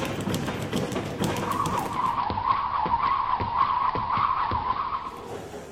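A video or display buzz runs through the whole clip: a steady buzz at 75 Hz with a fizzy hash of harmonics above it, sitting around 20 dB below the sound. It comes from a screen or video cable coupling into the audio path at the picture's field rate. Mains hum would sit at 50 or 60 Hz and sound smoother, so the 75 Hz pitch and the raspy upper hash point to a display rather than power wiring.

From 1.73 s to 5.40 s the audio shows digital radio blending to analogue. The receiver lost its digital stream and cross-faded, over about 475 ms, to the station's AM broadcast. The treble narrows to the AM band, the level drops by about 1 dB, and a hiss rises to sit roughly 25 dB under the sound. At 5.40 s it switches back and the full treble returns. A fixed low-pass filter or codec change would not bring in hiss or a gradual half-second cross-fade, and it would not reverse partway through the clip.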